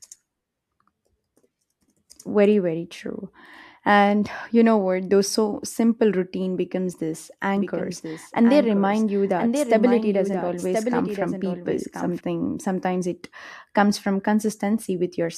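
A doubled audio track runs from 7.57 to 12.21 s in this speech clip, starting right after "simple routine becomes this" and ending just before "sometimes it comes from". Over that stretch a second, full-band copy of the speech trails the original by roughly a second, a few decibels quieter, with no reverberant tail or room colouring, and it switches in and out abruptly. The likely cause is the same signal being captured again through a slower path, or an edit leaving two misaligned copies layered together.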